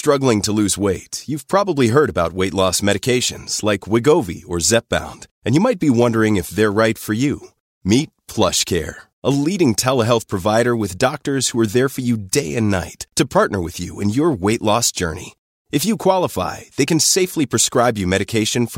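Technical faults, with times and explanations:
Nothing technical stands out here; the speech comes across steady and intact, with no faults to point to anywhere along the way.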